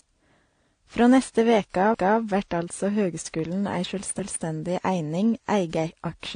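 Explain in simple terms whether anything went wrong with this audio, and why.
The speech was most likely passed through one lossy codec and then re-encoded by a second, a problem called transcoding between lossy codecs. Nothing above about 9.7 kHz survives, so the whole clip sounds dull, and the traces of both encodings are layered together.

The audio was also handled in chunks that overlap (overlapping chunks). The audio was cut into pieces about 2 seconds long, and the next piece began too early. Right after "neste veke", from 1.94 to 2.19 s, a quarter-second stretch plays twice, giving a stutter before "vert altså høgskulen ei".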